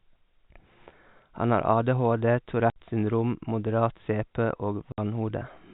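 Packet loss filled with silence at 2.70 to 2.76 s and again at 4.92 to 4.98 s: each 60 ms hole, consistent with two 30 ms packets missing, drops the speech to dead silence with abrupt, hard edges. The narrowband G.711 telephone sound around it stays intact.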